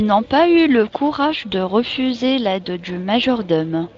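No technical faults are present: the speech runs through a Speex codec whose light processing fits a bitrate of around 24 kbps, with nothing above 7.7 kHz.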